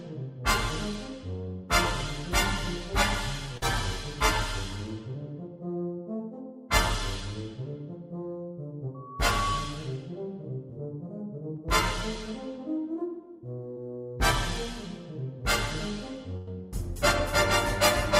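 Short concealed packet loss occurs at 3.57 to 3.63 s, at 11.57 s and at 13.74 to 13.77 s. Between about 10 and 40 milliseconds of the stream arrived too late, and the receiver extended the preceding sound to bridge each hole before blending back, leaving a brief smear or wobble. A loudspeaker feedback squeal runs from 8.94 to 9.95 s. The microphone is picking up its own loudspeaker, and at 1.1 kHz the loop gain passed unity, so that tone grew by itself over about half a second to roughly 5 dB above the audio. A burst of packet loss at 16.37 to 16.48 s removes about 100 ms. The decoder carried the last sound forward while fading it, giving a held buzz or dying hiss, and then resumed further along with the intervening audio gone.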